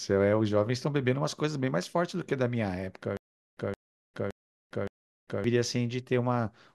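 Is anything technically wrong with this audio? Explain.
Yes. From 3.17 to 5.44 s there is a stutter with silent gaps: a stalled stream likely replayed its last 167 ms fragment four times, each separated by about 400 ms of silence, and the audio in between is lost.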